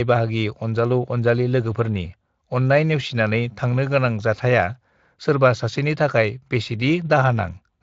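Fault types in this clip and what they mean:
No faults in this clip.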